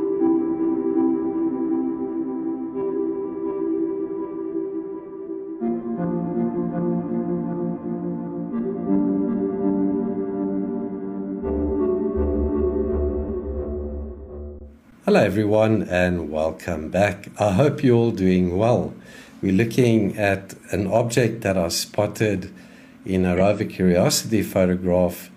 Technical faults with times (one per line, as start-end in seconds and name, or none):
2.93-2.97 damaged data in a compressed stream
13.24-13.29 damaged data in a compressed stream
23.36-23.41 damaged data in a compressed stream